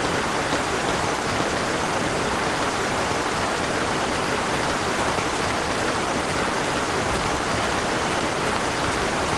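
No technical faults can be heard anywhere in the audio, and the signal stays steady and intact throughout.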